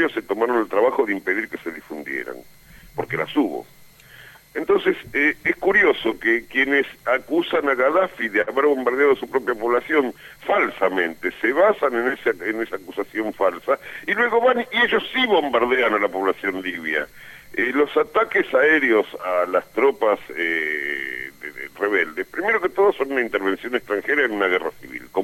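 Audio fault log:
8.41 to 8.50 s, short stall from a late packet: a sound hangs slightly too long with a faint buzz or dip, as the emptied jitter buffer stretched it 57 ms, losing nothing.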